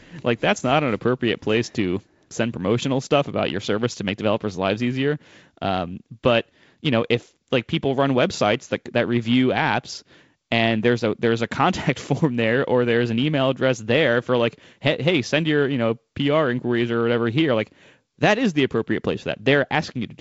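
No technical faults turn up anywhere in this speech recording. It carries the character of G.722 wideband telephone coding at 48 kbit/s, with nothing above about 7.7 kHz and only light coding noise from the reduced bit budget.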